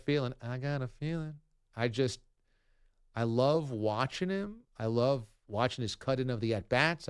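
No technical faults detected.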